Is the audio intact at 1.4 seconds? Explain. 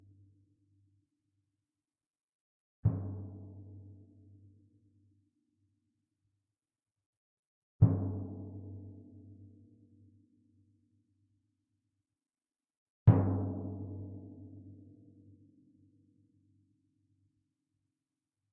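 Yes, the audio is intact at 1.4 seconds, with no dropout, click, distortion or other fault audible at that point in the sound.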